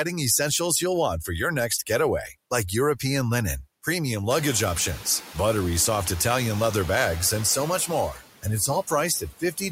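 Noise suppressor artifacts run through the whole clip. The suppressor pushes the background down by about 17 dB between phrases and lets it back up under the speech. On a spectrogram the noise floor pumps in patches, clearing in gaps and filling in under speech. The room noise rises by about 22 dB near 4.5 s, where it sits about 16 dB below the speech.

Speech cut by the noise suppressor follows at 8.13 to 8.23 s, just after "bags and so much", where roughly a tenth of a second dips by up to about 10 dB. It happens again between 9.2 and 9.62 s, where about a fifth of a second drops by up to about 15 dB. The suppressor took quiet speech for noise, so those moments sound faint and swallowed. The waveform envelope shows notches there, and the spectrogram energy fades in both places.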